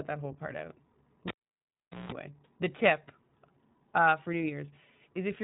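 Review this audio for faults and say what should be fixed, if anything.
From 1.28 to 2.12 s, between "that whole part out" and "the tip", there is a cable pulled and plugged in. A pop opens a near-silent stretch of about 0.79 s, then about 0.18 s of 60 Hz mains buzz as only the plug tip makes contact, and a second pop as the signal returns. Seat connectors firmly and mute the channel before repatching, using locking connectors where possible.

At 1.78 s there is a brief lost iLBC frames event: a short, slightly buzzy held fill where the decoder repeated the last pitch cycle with added noise to cover the gap. The length fits a single missing 20 ms frame, and because iLBC frames decode independently, normal output resumes immediately after. Reduce packet loss on the network path, and add forward error correction or redundant frames if the link cannot be made reliable.

The whole clip carries iLBC codec coloration: the bandwidth stops at 4 kHz, and the speech has a rough, slightly synthetic texture from frame-by-frame excitation coding. 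This fits the 15.2 kbps mode with 20 ms frames. Use a wideband codec such as Opus wherever both endpoints support it.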